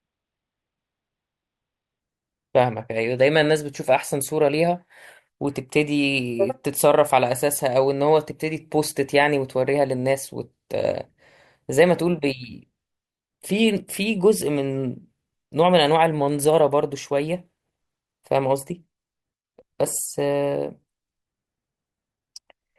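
From the start of the speech to 2.0 s, the adaptive stream is starting at a low bitrate. The treble is thin or synthetic-sounding and codec artefacts are prominent, which fits a low-rate Opus stream of around 12 kbit/s. At 2.0 s the quality jumps with no gap as the player, having measured the connection, switches to a higher-rate version, consistent with about 64 kbit/s, and the full top end returns.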